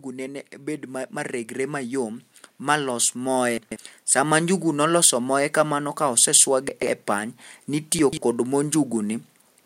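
From 0.15 to 5.1 s, automatic gain rising lifts speech and background together by about 9 dB. The control judged the input too quiet and slowly raised its gain. At 3.58 to 3.76 s, 6.69 to 6.87 s and 7.99 to 8.17 s, chunks play out of order. Each 46 ms chunk arrives three chunks late, giving jumbled moments.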